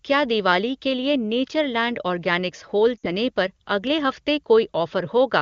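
From 2.98 to 3.07 s, right after "नेचर लैंड ऑर्गैनिक्स होल" and before "पर अगले हफ़्ते", lost AMR speech frames break the speech for about 60 ms, which fits three 20 ms frames. The wideband decoder repeats its last good pitch and vocal tract settings with shrinking gain, so the sound smears and fades quickly rather than cutting to hard silence or clicking as a plain dropout would, then returns briefly weak. The HD Voice coding around it sounds clear.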